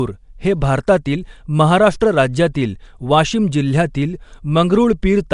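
Throughout, the speech sounds gritty and watery, with hiss around it and nothing above 10.6 kHz: likely Nellymoser compression, its starved bands refilled with noise.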